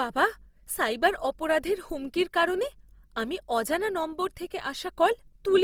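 A speech recording with Opus compression audible from start to finish: the speech sounds grainy and rough, its harmonics dissolving into hiss rather than swirling, most likely from the music (CELT) mode of Opus at a low rate around 24 kbps. A spectrogram would show energy reaching about 20.2 kHz, with upper bands filled by speckled noise instead of clean harmonic lines and almost no empty holes.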